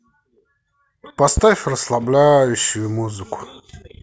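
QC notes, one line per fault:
1.37 to 1.40 s, loud pop: a single voltage step, likely from a plug, switch or static discharge, entered the signal path and was shaped by the circuits downstream into a brief pulse. It sits roughly 10 dB above the speech, so it lands as one sharp pop lasting about 30 ms, sharp at the front, while the speech continues underneath without a break.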